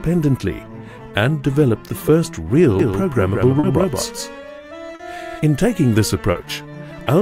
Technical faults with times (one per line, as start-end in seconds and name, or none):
2.79-5.39 doubled audio track
3.59-3.66 short concealed packet loss
4.95-5.02 short concealed packet loss
6.31-6.38 short concealed packet loss